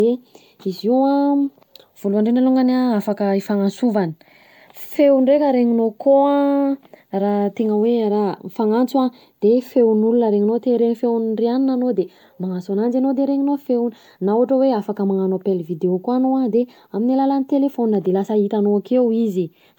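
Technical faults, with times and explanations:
Throughout: generation loss. The speech sounds swirly, smeared and hollow, with blurred consonant attacks and nothing above 19.9 kHz, likely from around ten successive MP3 passes near 128 kbit/s, each requantising on a shifted frame grid so noise and spectral holes accumulate.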